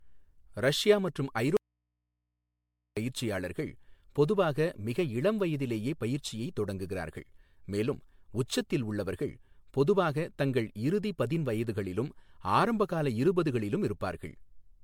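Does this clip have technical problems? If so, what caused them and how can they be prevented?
Yes. Throughout the speech there is a swirly, hollow smear, with consonant attacks blurred and a watery texture that sounds worse than a single encode at a moderate rate would. This is generation loss, likely from the audio being decoded and re-encoded as MP3 over and over, perhaps around seven times at something like 96 kbit/s. Each pass quantises on a shifted frame grid, so the noise and spectral holes pile up. The band still extends to about 19.9 kHz, so this is damage from repeated encoding rather than a narrow bandwidth. To prevent it, keep a lossless master and encode to MP3 only once, at the final step.

From 1.57 to 2.97 s, right after "ரஷ்யா மற்றும்", the speech cuts out abruptly for about 1.4 s and returns at "பயிற்சியாளர்கள் பொதுவாக மிக இளம்". This is an audio dropout to a faint residue. 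The gap is not silent. It holds mains hum about 55 dB below the speech level. The likely cause is a break upstream, such as a failing cable, connector or wireless link, while the input stage after the break stayed live and picked up hum from the open input. To prevent it, check and secure connections and monitor the feed during recording.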